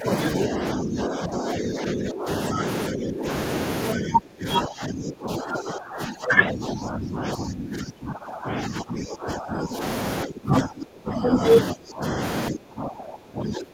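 The speech dips and breaks up from 0.0 to 3.27 s, 3.95 to 9.82 s and 10.25 s to the end, falling about 15 dB, then about 20 dB. This is speech suppressed in double talk, likely an echo canceller ducking the talker while the far side spoke.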